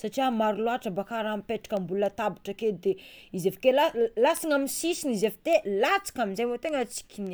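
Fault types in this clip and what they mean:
Word clock ticks: the speech carries a train of sharp ticks of uneven strength from 0.33 s to 7.27 s, roughly every 0.3 s, around thirty in all. That steady spacing fits a receiving device running free of the sender's clock, off by something like 70 ppm. Each time the two clocks slip a sample, a single sample goes missing or is doubled. Random clicks or dropouts lack this metronome-like regularity, and each tick here comes from a one-sample slip rather than a gap.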